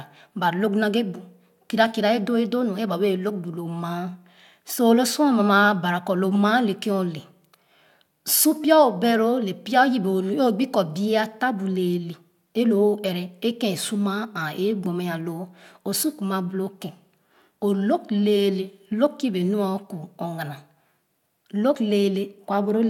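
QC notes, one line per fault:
21.74 s, compressed frames skipped: whole encoded frames were missing or rejected, so the speech jumps ahead by about 40 ms.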